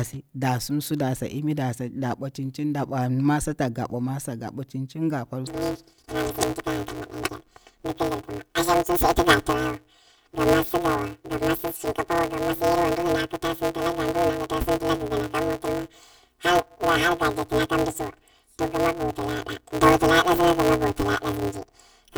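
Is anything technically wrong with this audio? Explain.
Yes. From 5.47 s to the end at 22.17 s, the speech suffers from planar audio read as interleaved. Each block stores all left samples, then all right samples. The player reads them as alternating left-right pairs instead. The blocks are only 5.33 ms long, which fits 256 samples at 48 kHz. Each block plays twice at double speed, so overall pace holds. At this short length there is no clear octave jump. Instead, a robotic buzz at about 188 Hz sits over the speech.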